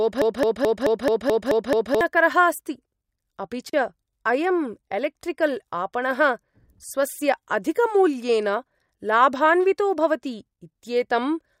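Speech, opening on a broken-record loop already under way at 0.0 s: a 216 ms fragment repeats exactly, back to back, until 2.01 s, likely from a stalled player or stream resending its last buffer. On a waveform it appears as identical tiled blocks, and the spectrogram shows a repeating stripe pattern. At 3.70 s a gap at a join of encoded pieces cuts the speech for 36 ms. The waveform shows a short flat stretch, and the spectrogram shows a narrow blank vertical band with smeared edges. The speech then resumes where it stopped, consistent with untrimmed encoder delay and padding at a join.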